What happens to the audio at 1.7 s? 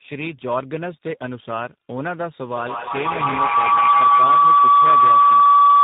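At 1.7 s the speech carries tandem speech coding, which is present throughout the clip rather than at that moment alone. The signal has passed through three speech codecs in succession, ending in G.729A at 8 kbit/s, with each stage re-encoding the previous stage's already degraded output. The errors compound, so the speech sounds rough, muffled and warbly, and nothing remains above 3.8 kHz.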